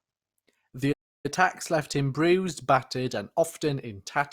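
At 0.92 s the speech cuts out mid-flow and the output goes silent for 0.32 s before sound returns at 1.26 s. This is a playback stall, likely the player running short of buffered data or its audio thread being held up until it recovered.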